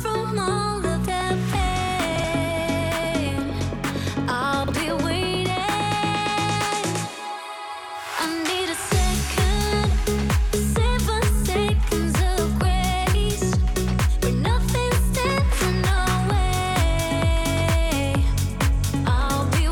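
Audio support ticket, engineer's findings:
Chunks out of order at 2.16–2.24 s and 4.64–4.72 s. Audible as brief jumbled stutter. Two 40 ms chunks swapped, one arriving a chunk late, leaving three hard joins. Probable fault in buffer reassembly or write ordering; no content lost.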